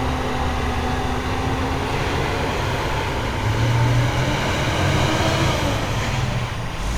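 A recording of sounds carries timecode bleed throughout: a chirping warble near 1 and 2 kHz, roughly 15 dB down, from 24-frame code leaking across. A spectrogram shows steady bands at both frequencies.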